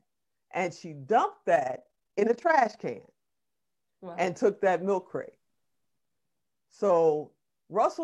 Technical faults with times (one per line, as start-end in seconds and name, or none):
1.56-2.82 overlap-add ripple